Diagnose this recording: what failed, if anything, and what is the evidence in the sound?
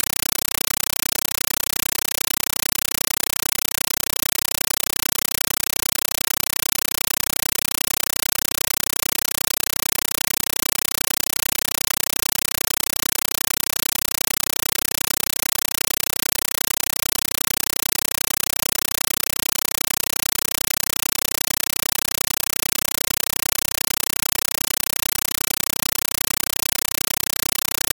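A compressed stream played as audio failed this recording at the playback stage, across the digital link. From start to finish the programme is replaced by loud, harsh static that chatters at 31.25 Hz, each 8 ms burst of noise followed by silence. That cadence points to AC-3 (Dolby Digital) frames, consistent with a 384 kbps stream, passed as raw PCM instead of being decoded. The bitstream's data and zero padding are reproduced directly as sample values.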